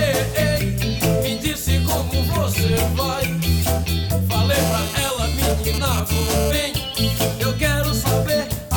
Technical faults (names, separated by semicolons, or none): GSM phone buzz